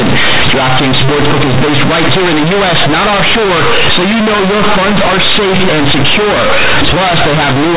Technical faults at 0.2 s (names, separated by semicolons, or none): companded audio read as linear